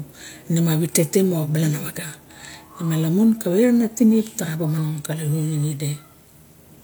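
A short recording of speech in which nothing technically wrong can be heard at any point in the signal.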